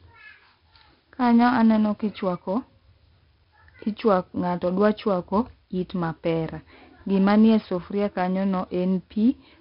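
From start to finish the speech carries 4-bit ADPCM compression, heavily damaged. Each sample is coded as a coarse step from a predicted value, so a gritty hiss rides on every loud syllable and sharp onsets smear where the step size lags behind. On a spectrogram the noise fills the band beneath louder passages, and everything stops dead at 5.3 kHz, which points to a low sample rate near 11 kHz and a stream of about 44 kbps.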